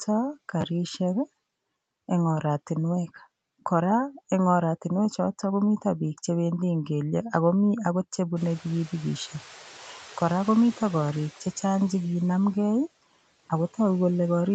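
At 0.61 s a repeated buffer produces a brief stutter: a short slice plays twice more with hard joins, consistent with a 10 ms buffer and roughly 20 ms of lost audio.

From 8.36 to 11.31 s the noise suppressor is catching up. Room noise jumps around 8.5 s, passes with little reduction at first, then sinks by about 6 dB as the estimate adapts over 2.95 s.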